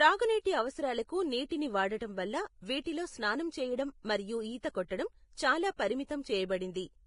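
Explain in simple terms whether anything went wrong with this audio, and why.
The audio was most likely squeezed hard by Vorbis compression at a low quality setting, which saves space by throwing detail away. The encoder cut off everything above about 10.6 kHz and stored the remaining treble so roughly that its fine detail turned into noise. From start to finish, the speech sounds dull at the very top yet hissy and grainy, with a rough edge on the voice and softened starts to sounds.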